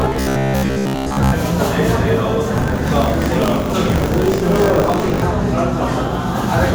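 From about 0.02 to 1.35 s there's robotic sound from repeated short buffers: a rigid, metallic buzz near 66.7 Hz. It's likely that audio arrived too seldom and short chunks were looped, fitting roughly 15 ms buffers, with most of the real sound skipped.

Then from 2.54 to 5.24 s comes buffer tearing, a steady rattle at 50 Hz, which points to a 20 ms period. The writer and reader of the ring buffer have slipped, so a small slice of each period holds audio from a few tens of milliseconds earlier, with hard joins either side.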